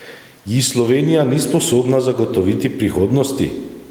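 Throughout the speech, the faint room noise, about 43 dB below the talking, swells up in every pause and ducks away under each loud syllable, with a swing of roughly 10 dB, leaving the delivery squashed and flat. This gain pumping is likely from input gain set far too high, forcing a fast limiter to clamp down repeatedly.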